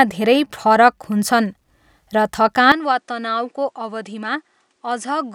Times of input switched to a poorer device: 2.72-5.34

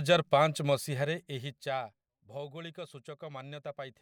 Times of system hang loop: none

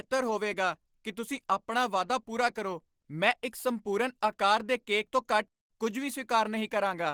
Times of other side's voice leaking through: none

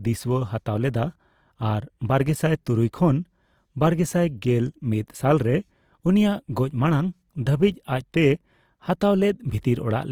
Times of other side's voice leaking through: none

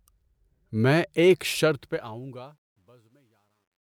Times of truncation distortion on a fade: 1.60-3.93

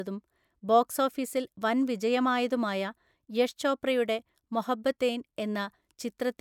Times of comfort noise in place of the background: none

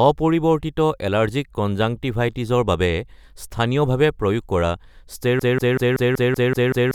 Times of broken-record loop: 5.39-6.95

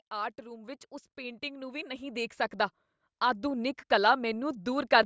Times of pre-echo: none

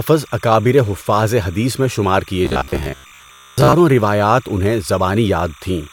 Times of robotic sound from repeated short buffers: 2.45-3.74

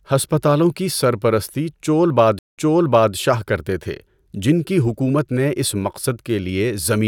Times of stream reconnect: 2.39-3.14

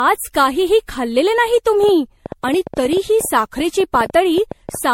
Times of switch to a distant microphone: none

